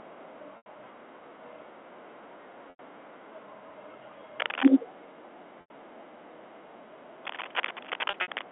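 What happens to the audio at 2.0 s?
Nothing goes wrong at 2.0 s: the speech continues intact there, carried through the narrow band of G.711 telephone coding with no dropout, click or distortion.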